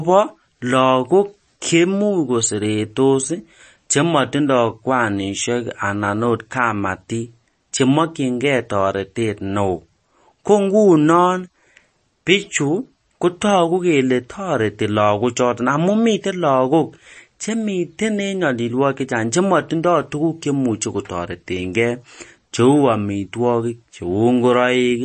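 From start to finish, the speech carries plainly audible MP3 compression damage, likely from a low-bitrate encode. Nothing is heard above about 8.4 kHz. The encoder cut the treble there to save bits, which fits a rate around 32 kbps. Weak frequency lines drop in and out between frames. That gives the audio a watery, swirling texture. S sounds turn metallic and chirpy. Sharp onsets lose their edge and smear.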